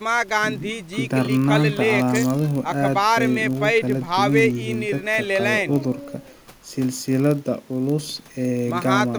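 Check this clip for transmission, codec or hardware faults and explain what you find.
One fault runs through the whole speech clip: a block size mismatch (padded).

From start to end, a steady buzz at about 43.1 Hz sits under the speech. That buzz rate fits a 1024-sample read block. The writing stage delivers slightly less than each block, and zeros fill the remainder, leaving a tiny gap every block. Playback runs only slightly slow, at 0.999 of normal speed. The strictly regular gap spacing separates it from random packet-loss dropouts.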